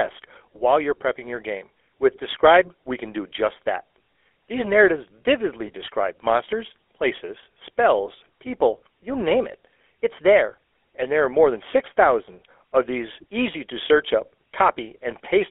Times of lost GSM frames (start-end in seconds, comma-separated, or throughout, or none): 5.66-5.71